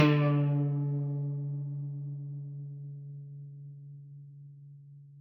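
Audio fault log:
throughout stereo read as mono: left and right samples are read in sequence as one channel, so the music plays at half speed, an octave low, with a faint mirror image up high.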